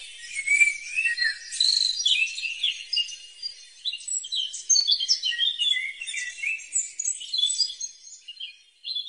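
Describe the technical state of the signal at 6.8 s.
An overlap between stream segments at 6.80 s removes about 8 ms of audio at a 2-second segment join, so the waveform jumps, heard as a tiny skip.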